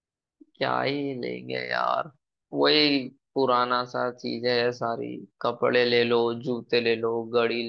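No technical faults are audible.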